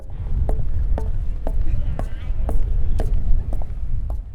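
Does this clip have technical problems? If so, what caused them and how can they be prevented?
No, nothing in this sound recording points to a technical problem in how the signal was captured, processed or delivered.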